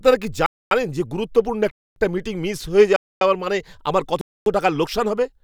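Speech interrupted by a gap between chunks: four 250 ms silences at 0.46–0.71 s, 1.71–1.96 s (between "যে গুরুত্বপূর্ণ" and "মিটিং মিস"), 2.96–3.21 s and 4.21–4.46 s (between "আমার কত" and "টাকার লোকসান হবে"), one after every 1 s of audio. The sound was delivered in one-second blocks with dead air inserted at each join, so nothing is lost but the flow breaks. A waveform shows flat-line holes with abrupt edges, and a spectrogram shows clean empty vertical bands every 1.25 s.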